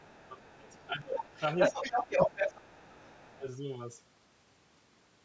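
From 0.0 to 1.42 s the talker's speech dips by up to about 20 dB while faint scraps of a second voice surface at 0.0 to 0.29 s and 0.68 to 0.84 s. That is speech suppressed in double talk, likely an echo canceller ducking both sides, unlike a plain level fade. The other side's voice leaking through, likely residual loudspeaker echo, is a distinct second talker. It becomes dominant, slightly louder than the speech, from 1.17 to 3.39 s. Shorter dips of about 15 and 10 dB follow at 2.17 to 2.41 s and 3.37 to 3.45 s.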